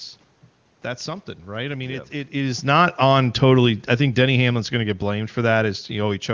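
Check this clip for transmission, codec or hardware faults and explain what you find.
One fault stands out: automatic gain falling, from 2.38 s to 6.29 s. Having judged the input too loud, or its background noise too strong, the gain control eases its gain down by about 8 dB over those four seconds, so the speech and the room noise behind it sink together. On a waveform the envelope tapers steadily; on a spectrogram the whole band, up to the call path's 8 kHz ceiling, fades evenly.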